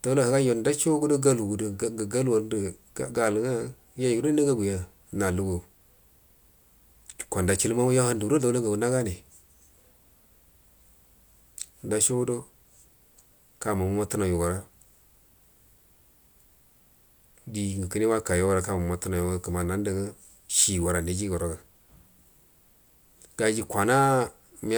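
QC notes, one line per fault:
Nothing stood out on listening to the speech.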